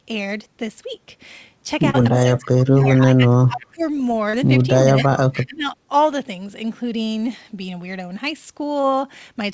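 At 1.90 s there is short concealed packet loss: about 40 ms of audio never arrived, and the decoder bridged the gap by extending the preceding sound for roughly 37 ms before blending back. It is heard as a brief smear in the speech rather than a clean silence, which separates it from a dropout. The same thing happens again at 4.30 s, with the same length and the same smear.

From 2.10 to 2.40 s a faint delayed copy of the speech appears, trailing the original by 293 ms at roughly 15 dB below it. This is echo leak, likely from a loudspeaker at the far end whose echo canceller let part of the signal back through. Weaker scraps follow at 2.77 to 2.85 s (about 20 dB down) and 3.60 to 4.00 s (about 30 dB down). The fixed 293 ms lag is what marks these as echo and not reverberation, which would smear continuously after every sound.

Overlapping those echoes, between 2.13 and 3.83 s, the main speech dips in patches adding up to about a second, falling as much as roughly 25 dB. 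This is speech suppressed in double talk: likely both sides were talking at once and the canceller turned everything down. It differs from packet loss because the level sinks and the speech is choked, not smeared.

The pattern repeats later. A brief echo scrap occurs at 5.04 to 5.08 s, about 25 dB down. Then from 5.30 to 5.75 s the speech is ducked by up to about 20 dB over roughly 0.3 s, while an echo at about 15 dB below the speech runs from 5.34 to 5.60 s.

Nothing is heard above 8 kHz, which fits the G.722 call path and the call microphone processing.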